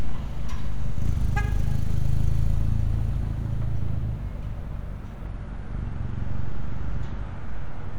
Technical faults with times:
5.27-7.98 adaptive stream at a lower bitrate

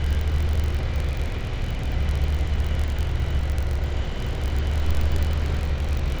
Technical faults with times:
0.00-6.20 filter restarted on every block

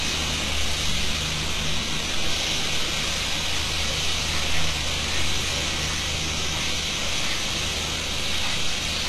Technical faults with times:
0.00-9.08 HE-AAC compression

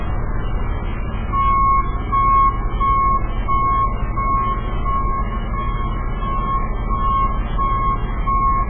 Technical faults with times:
0.00-8.69 MP3 compression

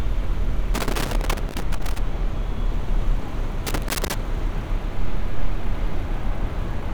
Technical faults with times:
0.74-1.99 loose connector crackle
3.67-4.14 loose connector crackle

